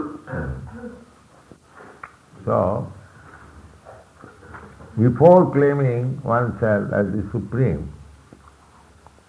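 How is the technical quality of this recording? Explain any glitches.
No glitches or faults detected.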